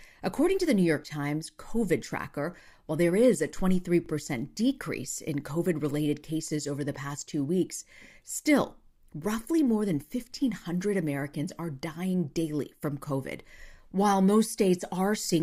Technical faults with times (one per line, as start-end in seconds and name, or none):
4.06 overlapping chunks
10.08 overlapping chunks